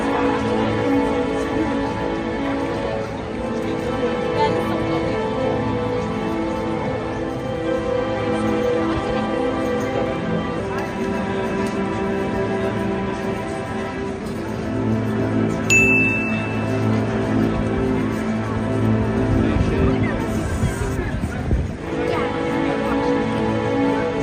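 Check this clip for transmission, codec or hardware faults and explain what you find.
Two brief jitter buffer speed-ups, at 14.17–14.95 s and 21.67–21.80 s. With too much audio queued, the receiver trimmed short pitch-period slices, roughly 50 ms each time. The sound runs hurried at unchanged pitch, mildly at 107% first, then sharply at 132%.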